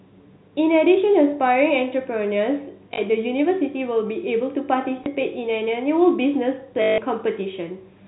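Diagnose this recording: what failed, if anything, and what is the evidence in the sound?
Packet loss with last packet repeated, at the network stage: 2.94–2.98 s (40 ms), 5.04–5.06 s (20 ms) and 6.82–6.98 s (160 ms). The receiver replayed the last packet, and the long run buzzes near 50 Hz, which fits 20 ms packets.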